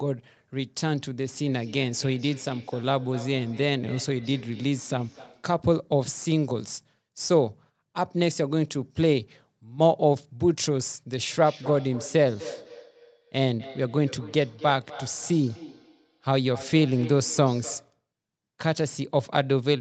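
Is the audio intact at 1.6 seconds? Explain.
No. From 1.35 to 5.56 s there is feedback echo between two devices: a second device replays this microphone's audio, which gets picked up again. Faint, thinning copies return roughly every 300 ms, at most about 21 dB below the speech, appearing on a spectrogram as fading duplicate patterns spaced evenly in time.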